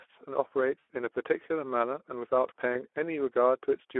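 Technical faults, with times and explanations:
throughout: Speex codec. The speech is confined to a 300 Hz to 3.4 kHz line band and sounds noisy and hoarse, which fits Speex at around 11 kbps. Too few bits go to the excitation signal, so the fine structure of the voice is replaced by rough, buzzy approximation.
0.79–0.90 s and 2.73–2.81 s: VoIP packet loss concealed by the speech codec. About 100 ms and then 20 ms of audio went missing. The decoder kept extending its last pitch and filter at falling gain, so each gap becomes a fading smear rather than silence, and the voice stays weakened briefly afterwards.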